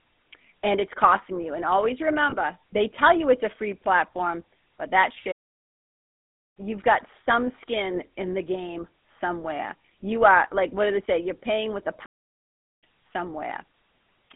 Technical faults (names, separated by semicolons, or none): GSM full-rate codec; lost GSM frames; playback stall